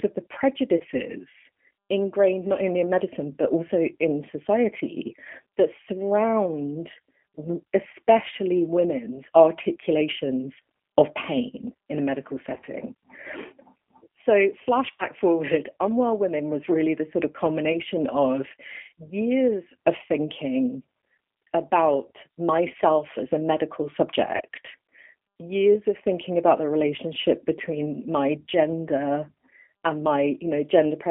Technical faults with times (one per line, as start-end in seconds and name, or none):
0.00-31.11 G.729 codec
0.77-0.83 VoIP packet loss concealed by the speech codec
12.54-12.70 VoIP packet loss concealed by the speech codec
14.97-15.05 VoIP packet loss concealed by the speech codec
17.73-17.76 VoIP packet loss concealed by the speech codec
24.36-24.42 VoIP packet loss concealed by the speech codec